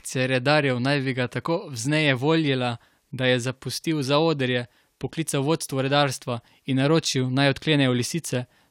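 Nothing goes wrong anywhere along the way here, so there's no technical fault to point to in this bit of speech.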